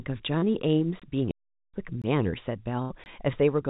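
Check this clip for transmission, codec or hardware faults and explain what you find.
Four kinds of fault are audible in this speech, heard through a narrowband call path with nothing above 4 kHz, consistent with G.711 A-law at 64 kbps.

Short concealed packet loss at 0.38 to 0.44 s: a brief smear where the sound seems to hang and wobble for a moment before blending back. About 40 ms of audio never reached the decoder in time, and the receiver filled roughly 36 ms by extending the preceding sound, following its pitch where it was voiced and using shaped noise where not, then crossfading into the real signal again.

Gap between chunks at 1.00, 2.02 and 3.04 s: three short dropouts of about 21 ms each, spaced about one second apart. That regular spacing shows the audio was handled in one-second chunks with a small silence inserted at each join, from padding or a late start of each chunk. 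Nothing is removed. The flow is simply interrupted at every boundary.

Playback stall from 1.31 to 1.74 s: the sound stops mid-flow and stays silent for about 0.43 s, then continues. This is a much longer silence than the chunk gaps and sits apart from their one-second rhythm. It was likely caused by the player running out of buffered data, or by its audio thread being blocked, so output went silent until it recovered.

Burst of packet loss at 2.82 to 2.92 s: the sound is held and fades, then resumes further on, with a piece of the audio missing. Around 80 ms arrived too late or not at all, as consecutive packets. The receiver stretched the last sound across about 77 ms while lowering its level, then jumped ahead to the next audio that did arrive.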